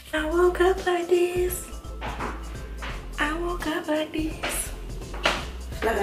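Nothing is technically wrong with this clip.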